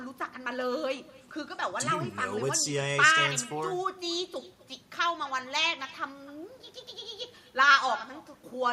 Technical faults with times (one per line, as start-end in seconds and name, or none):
0.00-8.72 echo with no canceller